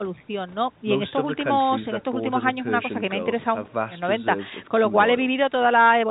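No technical faults can be heard in this speech. The G.711 telephone coding keeps everything below 4 kHz, with at most a faint level-following hiss from its 8-bit logarithmic steps sitting well under the voice.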